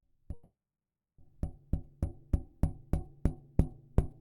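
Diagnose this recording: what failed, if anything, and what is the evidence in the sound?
A call audio freeze at the network and jitter-buffer stage runs from 0.33 to 1.20 s: the last sound is stretched into a fading buzz or hiss, then about 660 ms of silence, before playback resumes where it stopped. Nothing is lost, but everything after arrives 850 ms late, likely from delayed packets draining the buffer.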